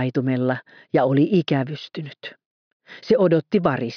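Nothing technically wrong can be heard anywhere in this audio. There are no faults to place in time or trace to a cause.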